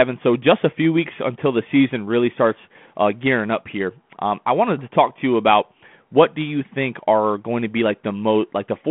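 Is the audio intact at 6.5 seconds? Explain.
Yes, the audio is intact at 6.5 seconds, with nothing there beyond the narrow telephone band and light coding grain of the 32 kbit/s G.726 ADPCM path it passes through.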